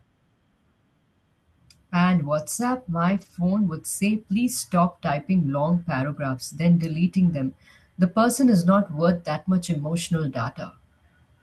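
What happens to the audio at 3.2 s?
Around 3.2 s, between 3.09 and 3.31 s just before "would say", the speech turns briefly rougher and noisier: a lost packet rebuilt from error correction. Several packets were lost, and the decoder played the lower-bitrate copies carried by following packets, so no gap opens.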